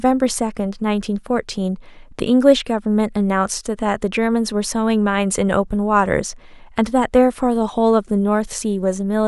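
No technical faults detected.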